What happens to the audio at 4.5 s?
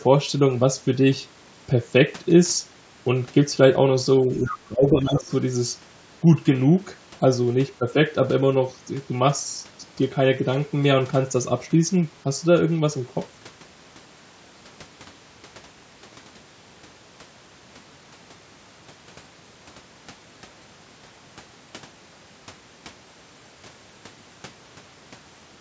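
Speech suppressed in double talk runs from 4.21 to 5.29 s: the voice dips by roughly 15 dB, likely because an echo canceller confused overlapping talk with loudspeaker echo. The other side's voice leaking through appears from 4.44 to 4.55 s, a faint second voice well below the speech, likely echo the canceller failed to remove.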